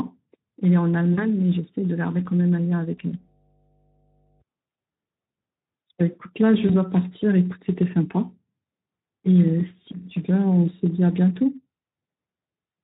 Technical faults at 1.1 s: Speex codec; VoIP packet loss concealed by the speech codec

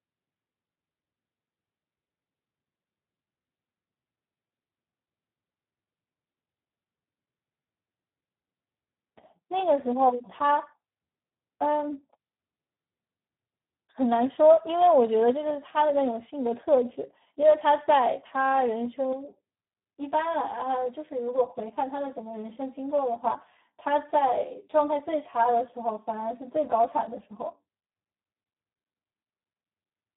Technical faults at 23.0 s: Speex codec; channel delay (comb filtering)

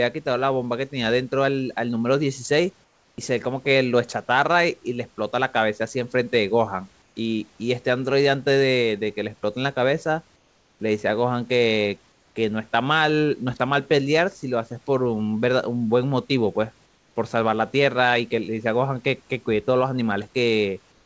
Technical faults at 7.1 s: comfort noise in place of the background

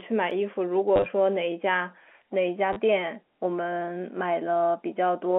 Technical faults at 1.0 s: packet loss with last packet repeated

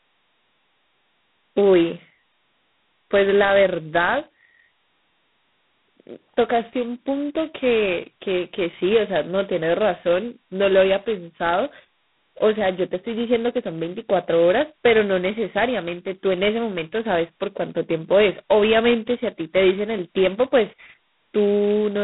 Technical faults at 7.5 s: G.726 ADPCM

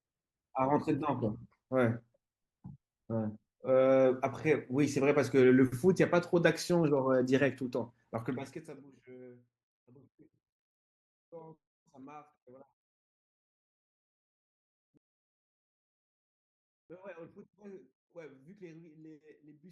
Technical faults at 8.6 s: zipper noise

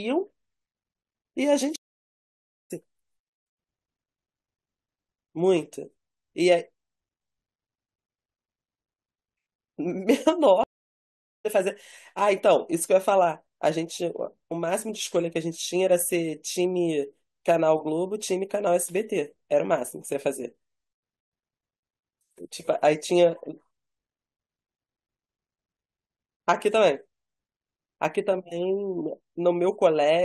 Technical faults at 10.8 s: stream reconnect

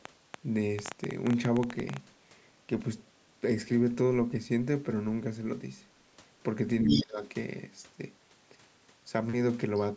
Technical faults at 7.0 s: speech suppressed in double talk; other side's voice leaking through

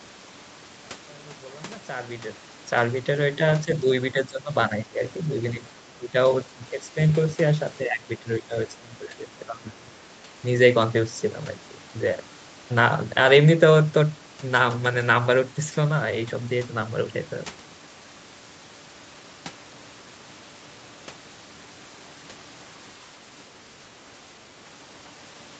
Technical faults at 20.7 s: none

